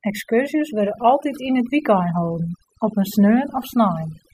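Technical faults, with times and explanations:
Throughout: overdone noise removal. Noise reduction set too strong turns individual frequency bands down whenever they sit near the estimated noise floor, so quiet speech detail vanishes too. The background drops and breaks up into twinkling specks, and a spectrogram shows scattered isolated blobs in place of the continuous noise floor.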